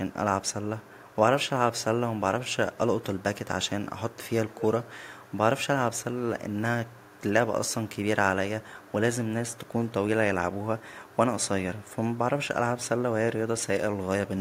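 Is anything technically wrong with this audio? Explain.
Yes. Echo leak, a delayed copy of the speech, appears at 0.11–1.16, 2.52–3.23, 4.11–5.35, 6.49–7.21, 8.62–8.92, 9.51–9.92, 10.54–11.16 and 11.82–12.17 s. It lags by 191, then 227, then 317 ms, and is loudest at 4.11–5.35 s. It is likely residue that a far-end echo canceller failed to remove. On a spectrogram it shows as a weak, time-shifted duplicate of the harmonic pattern.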